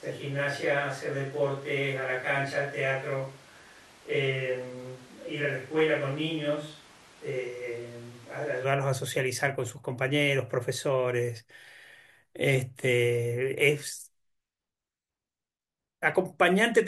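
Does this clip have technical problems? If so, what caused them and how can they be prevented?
Yes. Until 8.63 s the speech is roomy, thin and about 5 dB quieter, then snaps back; likely a switch to a distant microphone. Monitor the close mic's feed throughout.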